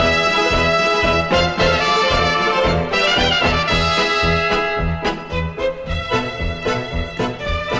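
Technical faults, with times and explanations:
No technical faults, with times and explanations, to report.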